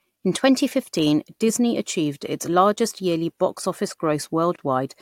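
At 4.56 s the speech drops out abruptly for about 26 ms, resuming at 4.59 s exactly where it left off, with edges that are sudden but smeared. This is a gap at a join of encoded pieces: the audio was encoded in separate sections and butted together untrimmed, so the padded last frame of one section and the silent start-up delay of the next both remain, opening a short hole in otherwise continuous sound.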